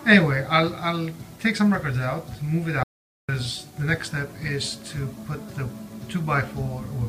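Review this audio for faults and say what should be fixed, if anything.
An audio dropout to silence runs from 2.83 to 3.29 s, about 0.45 s of silence with no room tone. The input was likely lost briefly, via a loose connection or momentary mute, while recording continued. Waveform: flat line; spectrogram: blank vertical band. Secure cabling and monitor input levels during capture to prevent it.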